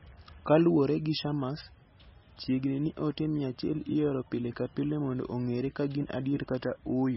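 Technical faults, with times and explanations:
Throughout, MP3 compression: the speech is dull and watery, with a swirly shimmer over it and softened consonant onsets, and nothing at all comes through above about 5.6 kHz. That hard top edge is the encoder chopping off the treble to save bits, and the swirl is weak frequency lines flickering in and out from frame to frame. The damage is heavy enough that it likely comes from a very low MP3 bitrate, something around 18 kbps.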